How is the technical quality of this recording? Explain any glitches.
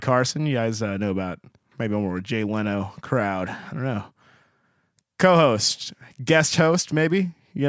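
The recording has one fault, aliasing, present throughout the speech. The sound points to a drop from 44.1 kHz to a 16 kHz rate with no anti-aliasing filter first, so everything above the new 8 kHz limit has folded back below it onto unrelated frequencies. Sibilants come out gritty and metallic, with the folded energy sitting around 20 dB under the speech. A clean low-pass would simply dull the top end. Here the spectrum instead stays full right up to 8 kHz with false content.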